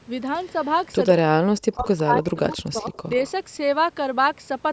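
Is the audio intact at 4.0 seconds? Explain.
Yes, at 4.0 seconds the speech comes through intact, with no dropout, glitch or distortion at that moment.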